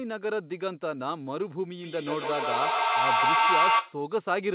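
Speech over a narrowband call path (nothing above 4 kHz) has a feedback howl from 1.81 to 4.06 s: a tone near 1 kHz with the loop repeating roughly every 150 ms, peaking about 7 dB above the speech as the microphone-to-loudspeaker loop gains level on each pass.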